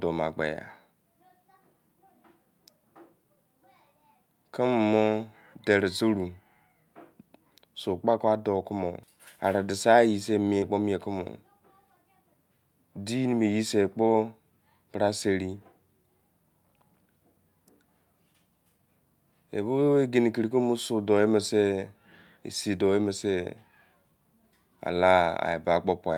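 A speech recording with two short, separate interruptions about a second and a half apart. At 9.03 s there is a hard skip with audio missing between chunks: roughly a third of a second of speech is simply gone, and the sound on either side is butted together with no silence in between. The likely cause is a recorder or processing stage that works in fixed blocks, here pointing to blocks of about 10 s, and drops material while it closes one block and opens the next. From 10.58 to 10.64 s there is short concealed packet loss. About 40 ms of the signal did not arrive at the decoder in time, and the receiver covered 37 ms of that gap by extending the preceding sound before blending back into the real signal. The result is a brief smeared patch.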